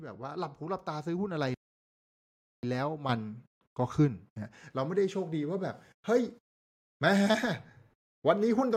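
Speech clip with the microphone volume stepped up at 3.09 s. Voice and background jump together by about 8 dB, as the software raised the input gain in one step.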